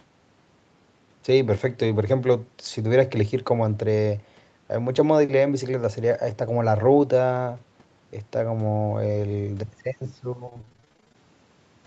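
From 10.45 to 11.16 s the speech turns choppy and robotic, the sound of repeated packet loss. Packets went missing or arrived late over and over in this stretch, 18 gaps in about 0.7 s. Each hole was patched by stretching the sound that came just before it. The longest gap is 27 ms. About half the span is concealment rather than real audio. The rest is broken up, so pieces of the speech drop out.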